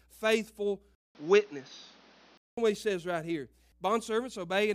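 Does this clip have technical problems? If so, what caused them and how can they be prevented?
Yes. From 0.95 to 2.57 s, just before "what he says right", the audio drops out for 200 ms, then turns dull and band-limited with nothing above 6.6 kHz. The level shifts by a few dB and a new low noise floor appears, likely from the input switching to a poorer device. Lock the recording input to a fixed microphone and disable automatic device switching during sessions.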